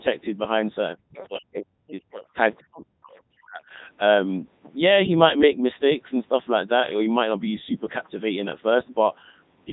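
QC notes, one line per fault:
Throughout, Codec 2 vocoder: the speech sounds robotic and buzzy, with a synthetic quality on every syllable. At about 3.2 kbit/s the codec sends only pitch, voicing, energy and a spectral envelope, and the decoder rebuilds the voice from sine waves, so the original waveform is lost and the damage is heavy.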